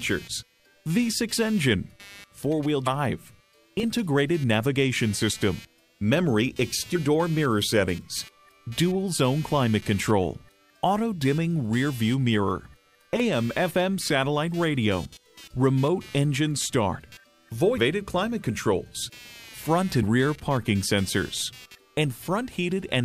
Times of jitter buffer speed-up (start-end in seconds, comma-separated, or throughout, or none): none